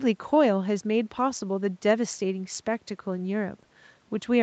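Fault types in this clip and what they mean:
Nothing stood out on listening to this speech, with no dropouts, glitches or other disturbances to point to.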